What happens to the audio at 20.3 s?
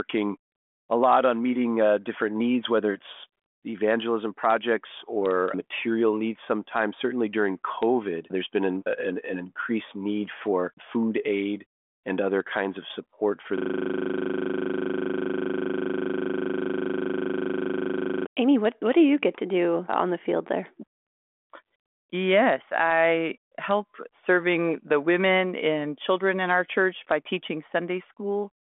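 Nothing goes wrong at 20.3 s: the speech carries on intact through the G.726 ADPCM telephone path, with its usual band limit near 3.7 kHz.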